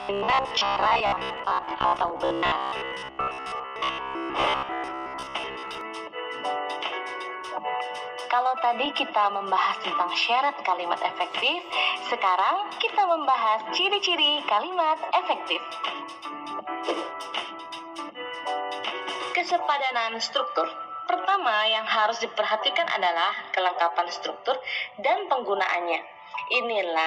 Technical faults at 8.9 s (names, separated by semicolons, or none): repeated frames